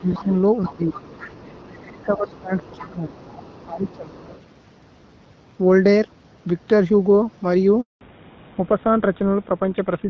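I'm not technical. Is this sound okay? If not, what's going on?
No. During the first four seconds both ends of the call were talking at once, and the phone's echo canceller likely couldn't tell this talker from the other person's voice coming out of its loudspeaker, so it turned everything down. This is speech suppressed in double talk: the voice dips sharply or fades out from 0 to 0.29 s, 0.67 to 0.9 s, 1.67 to 3.13 s and 3.65 to 4.11 s.

The same echo canceller also likely failed to fully remove the other person's voice picked up by the microphone, so the other side's voice is leaking through. It is a faint second voice underneath, heard from 0.12 to 0.25 s, 0.63 to 1.86 s and 2.33 to 4.41 s.

At 7.81 s the phone switched the call from one network to another, and no sound got through during the switch. This handover gap leaves the voice silent for 0.2 s, until 8.01 s, and anything said in that moment is lost.

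Right after that switch the call dropped from HD Voice to an older, lower-quality phone codec. This fallback to narrowband removes everything above 4 kHz from 8.01 s to the end, so the voice sounds duller, more muffled and a bit rougher, like an old phone line.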